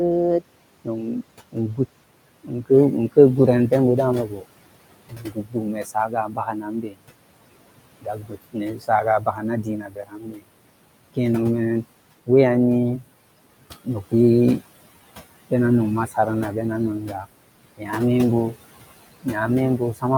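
Throughout, noise suppressor artifacts: the suppressor pulls the room noise down by about 21 dB, so it sinks between phrases and rises under the speech. The suppressor also mistook parts of the speech for noise, causing speech cut by the noise suppressor from 0.4 to 7.01 s, 8.01 to 11.18 s and 12.26 to 20.04 s. Soft sounds drop by up to about 22 dB and come out swallowed and faint, for roughly three seconds in the first stretch, about a second and a half in the second, and under a second in the third.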